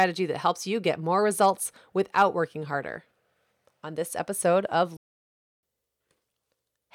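At 4.97 s, just after "this episode of", the speech cuts to silence for about 0.66 s, returning at 5.63 s. This is a playback stall, likely the player running short of data or its thread being blocked, so output stopped until it recovered.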